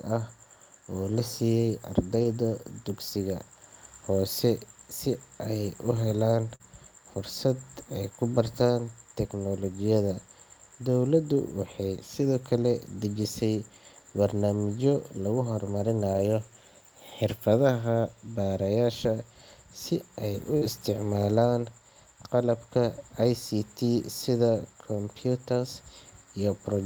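A speech recording with lost packet rebuilt from error correction at 2.15–2.37 s, 16.14–16.2 s and 20.61–20.67 s. Low-bitrate backup copies fill these spans without gaps, but they sound rougher and noisier, showing as grainier, smeared spectrogram texture. The first span is about 120 ms, which fits several separate lost packets. Short concealed packet loss at 6.55–6.62 s and 20.58–20.63 s replaces roughly 40 ms each with extrapolated sound, heard as a brief smear or wobble. On the waveform it appears as a repetitive, smoothed stretch, and the spectrogram shows stretched harmonics or flat noise before the real signal resumes.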